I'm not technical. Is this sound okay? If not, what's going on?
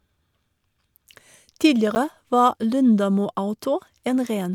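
No. At about 1.95 seconds there is a tiny tick in the speech. It is a block of digital silence: for about 10 milliseconds the sound was replaced by complete nothing, then came straight back. Because it drops out and returns with no fade, the edges make that click. This usually happens when the program producing the audio didn't fill its output in time.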